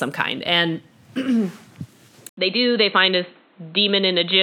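Speech clip where, at 2.29 s, an 80 ms gap opens and the sound turns dull through the end, with nothing above 4.2 kHz, level down about 5 dB and new background noise roughly 35 dB under the signal, likely the input switched to a poorer device. A spectrogram shows a hard ceiling at 4.2 kHz after the gap; the waveform shrinks and gains a raised noise floor.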